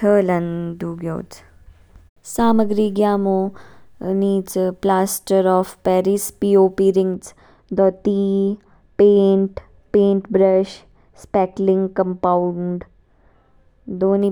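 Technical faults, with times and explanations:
7.14 to 14.22 s, de-emphasis applied wrongly: just after "पी ओ पी" the speech turns dull and muffled, as a treble cut was applied without matching pre-emphasis, falling to about 13 dB down at 10 kHz. The smooth, gradual slope sets it apart from a low-pass filter's abrupt cutoff.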